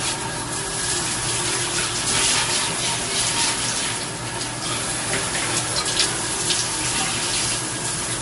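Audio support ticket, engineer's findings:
Throughout the clip: layered coding artefacts and nothing above 11.2 kHz. This is likely transcoding between lossy codecs. It fits an MP3 pass near 48 kbit/s re-encoded as AAC-LC. The AAC stage spends bits on the MP3 damage, adding its own artefacts.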